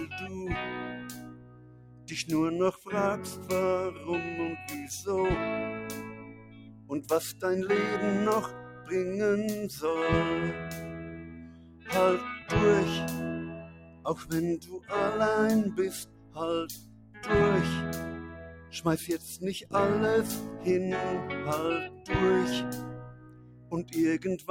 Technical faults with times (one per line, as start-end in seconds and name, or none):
0.00-24.50 noise suppressor applied to music or sounds
0.80-4.07 sound cut by the noise suppressor
6.03-24.47 sound cut by the noise suppressor